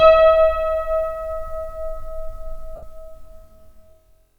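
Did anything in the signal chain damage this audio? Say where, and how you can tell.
Yes, there are lost LE Audio frames in the Bluetooth link between 2.76 and 2.83 s, a gap of about 67.5 ms, which fits roughly nine 7.5 ms LC3 frames. The LC3 decoder filled the hole by repeating the last good spectrum with randomised phase signs, so any tonal content turns into a brief noisy smear that fades toward the end. On a spectrogram, harmonic lines dissolve into a diffuse block there. The waveform shows a short stretch of noise-like fill that decays in level.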